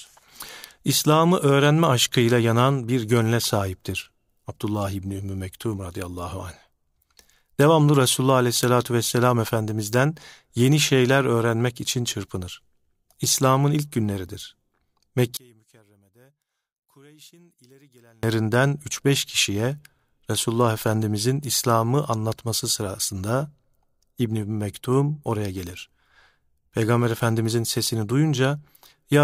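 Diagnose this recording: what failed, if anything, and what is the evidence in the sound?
From 15.37 to 18.23 s the speech drops about 34 dB. One channel is inverted, likely reversed analogue wiring. The centred voice cancels in mono.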